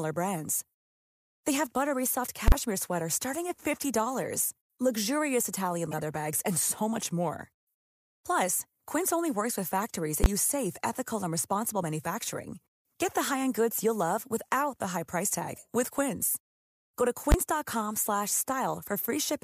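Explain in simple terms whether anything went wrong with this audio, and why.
Two different faults interrupt this speech recording.

The first is invalid numbers at full scale, at 2.48 to 2.52 s, 10.24 to 10.26 s and 17.32 to 17.34 s. A calculation broke and produced impossible values, so the output jumped to the loudest level the system can produce and stayed there briefly. Each block is very short, 40 ms for the first and 20 ms for the other two, so each is heard as a single sharp bang. That flat, maximum-loudness blast is what sets it apart.

The second is a corrupt frame decoded, at 5.91 to 6.03 s and again at 9.02 to 9.08 s. Part of the compressed data was damaged, and the decoder played it anyway, putting sound at the wrong pitches. The first spans a handful of short frames and the second a few. They come through as chirpy, squeaky blips that are noticeably quieter than the bangs. 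They sound like strange wrong noises rather than a hard explosive hit.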